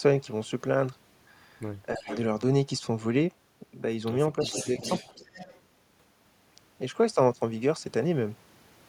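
At 1.95 s a faint repeat of the talker creeps in for about a fifth of a second, trailing the original by roughly 331 ms and sitting somewhere around 15 dB down. It's an echo leak: the far end is likely on a loudspeaker, and its echo canceller let some of the mic pickup slip back to us. It happens again, longer, from 4.39 to 5.6 s, with the same delay and level.

Overlapping those moments there's speech suppressed in double talk. From 1.98 to 2.1 s the main voice ducks hard, about 20 dB at its deepest, for roughly a tenth of a second. Then from 4.48 to 4.81 s there's a much milder dip of a few dB, adding up to only a brief moment. That's likely the canceller getting confused when both sides were active and pulling everything down rather than just the echo.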